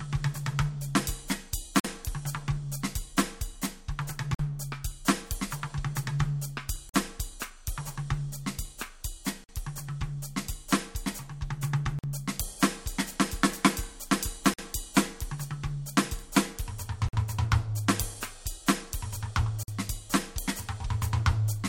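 The music was delivered in 2.5 s chunks with a gap between chunks: each join has about 48 ms of silence inserted rather than the next block following straight on. Nothing is missing from the music itself, but it drops out abruptly at every join, giving regular hard-edged holes at 1.80, 4.35, 6.89, 9.44, 11.99, 14.54, 17.09 and 19.63 s, a steady stutter every 2.55 s.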